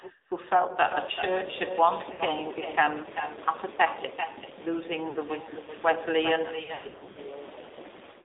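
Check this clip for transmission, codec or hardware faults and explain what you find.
Three faults are audible: an uncancelled echo and a narrowband mobile codec throughout, plus several bursts of lost AMR speech frames.

Echo with no canceller, throughout: the far end's loudspeaker feeds its microphone and nothing removes that path, so the speech returns after roughly 0.4 s as a thinner copy, about 10 dB below the original, trailing every phrase.

AMR narrowband mobile codec, throughout: the call passes through AMR-NB at a low bit rate, consistent with its 7.4 kbps mode, rebuilding speech from a vocal-tract model and a few pulses. The line is confined to 300 Hz to 3.7 kHz, with a plainly buzzy, synthetic edge.

Lost AMR speech frames, at 2.12 to 2.23 s, 5.10 to 5.19 s and 6.64 to 7.18 s: radio errors corrupted frames, so the decoder repeated its last good pitch and filter settings at falling gain. 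The first two gaps, about 80 ms and 60 ms of lost audio, cause brief warbly dips. The last scatters about 360 ms of losses over 520 ms, with runs up to 100 ms, smearing and fading the sound before it returns rough.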